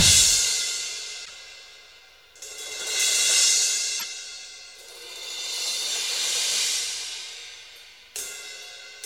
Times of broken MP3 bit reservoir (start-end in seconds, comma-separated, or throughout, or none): 1.24-1.30, 3.99-4.04